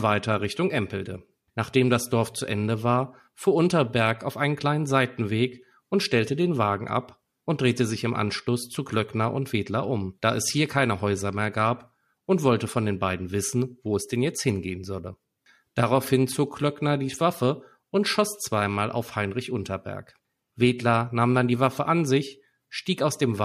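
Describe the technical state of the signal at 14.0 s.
Faint, regular ticks recur in the speech roughly every 0.7 s. These are clock slip clicks, running from 0.22 to 23.09 s, likely from two unsynchronised clocks about 30 ppm apart slipping one sample each time.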